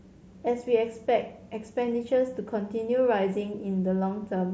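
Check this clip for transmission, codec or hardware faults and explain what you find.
Nothing here points to a transmission, codec or hardware fault; the speech comes through a Bluetooth mSBC headset link that's simply doing its usual job.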